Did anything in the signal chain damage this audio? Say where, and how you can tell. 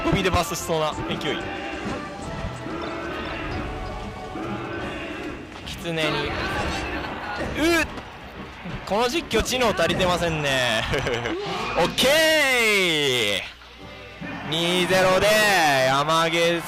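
No, nothing along the chain seems to have left a mark here: there's no audible damage at any point that would trace back to the wiring, the converters, the processing or the delivery.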